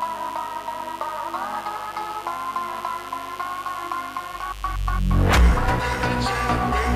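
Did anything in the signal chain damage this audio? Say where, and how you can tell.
Yes. Mains buzz runs through the whole clip, so the damage is in the analogue wiring. A steady, raspy buzz sits roughly 20 dB under the sound. Its harmonics stack on 50 Hz and climb into the kilohertz range. Switching spikes from a dimmer, rectifier or broken shield entered twice per mains cycle.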